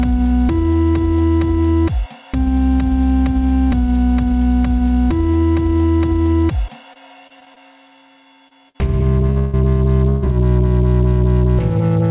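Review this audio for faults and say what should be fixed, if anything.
Repeated packet loss between 6.68 and 7.58 s: packets kept going missing, seven gaps (longest 27 ms) filled with continued sound, leaving about 11% concealed and a choppy, robotic texture.

Short concealed packet loss at 8.48 s: about 20 ms never arrived and was patched over 27 ms by extending the previous sound, producing a brief smear.

Bursts of packet loss at 8.69 to 8.76 s, 9.30 to 9.38 s and 10.09 to 10.27 s: runs of packets were lost, so the receiver extended and faded the last sound across gaps of 55, 58 and 131 ms, skipping 60, 60 and 120 ms of audio.

Long network dropout from 9.38 to 9.55 s, directly after the second burst, likely from a stall in delivery: a fading continuation fills about 151 ms, and about 140 ms of audio is gone.

Across the whole clip, nothing reaches above 4 kHz, which fits the G.711 path the call ran over.

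To fix this, stabilise the network link and add forward error correction with a larger jitter buffer, so lost or late packets can be recovered before playback.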